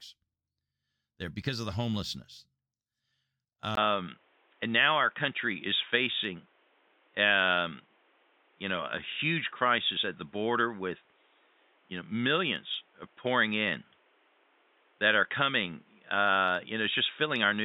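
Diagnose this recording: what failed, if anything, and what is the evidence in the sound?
At the capture-device stage, the speech drops out for about 20 ms at 3.75 s. From then to the end, nothing is present above 3.8 kHz, the level shifts by a few dB, and a new noise floor sits around 40 dB down. This is likely an input switched to a poorer device.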